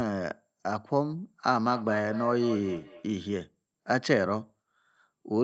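Between 1.6 and 3.15 s this speech clip picks up a trailing echo: the speech comes round again at roughly a fifth of a second, peaking at about 14 dB below the speech itself. This is feedback echo between two devices. A second device in the same room plays back what the first microphone sent, and that microphone hears it again. Each echo canceller removes only its own device's playback, so the repeat survives. The call path's limit near 8 kHz also shows.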